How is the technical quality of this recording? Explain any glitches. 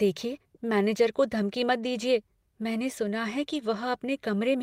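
One glitch stands out. Right after "दीजिए मैंने सुना है", from 3.53 to 3.59 s, a lost packet rebuilt from error correction plays a rougher, noisier low-bitrate copy, about 40 ms, likely from two packets. Unlike a dropout or smeared concealment, nothing goes silent or repeats.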